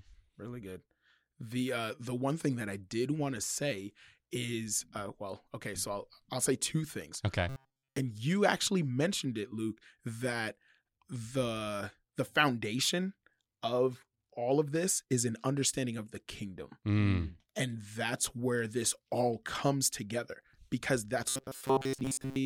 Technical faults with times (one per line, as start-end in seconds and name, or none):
7.49-7.98 robotic sound from repeated short buffers
21.29-22.46 robotic sound from repeated short buffers